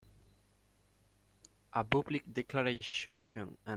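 From 2.73 to 3.02 s the speech catches and drags. It halts four times in about 0.3 s, each halt filled with a stretched copy of the sound just before it, the longest lasting 70 ms. Together the fills cover about 45% of that span. These are repeated stalls (stutter): packets arrived late or too slowly, so the jitter buffer kept running dry and the receiver padded each wait before resuming. Nothing is lost, but the delivery lurches.

At 3.06 s the speech freezes into a fading continuation of the last sound. It holds for 290 ms without dropping to silence, then picks up at 3.37 s exactly where it stopped, now running 290 ms later than before. This call audio freeze was likely caused by packets held up in transit that emptied the jitter buffer. The receiver bridged the wait with synthetic sound, so the freeze adds a gap rather than removing any speech.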